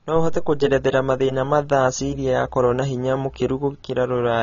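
Throughout, the speech stops at 6.9 kHz with a warbling fizz on sibilants that a clean low-pass filter wouldn't leave. That points to low-bitrate AAC compression, likely.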